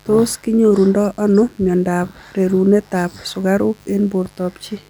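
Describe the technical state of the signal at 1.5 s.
At 1.5 s the speech carries mains buzz, present throughout the clip. Sharp switching spikes arriving twice per 50 Hz cycle generate a dense series of 50 Hz harmonics extending to several kilohertz, producing a steady, raspy buzz sitting well below the speech.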